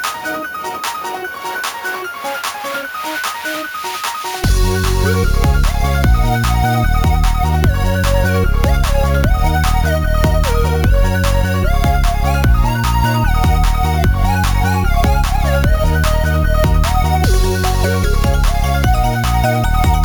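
Throughout, the audio was raised from 16 kHz to 44.1 kHz by repeating each sample without a smoothing filter, causing imaging from sample-and-hold upsampling. Mirrored spectrum copies, the first spanning 8 to 16 kHz at about 22 dB below the signal, add a metallic fizz that follows the sound's level.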